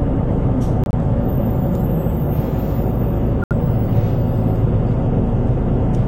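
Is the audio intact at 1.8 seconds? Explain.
Yes, at 1.8 seconds the audio is intact, with no dropout, click, distortion or other fault to be heard at that moment.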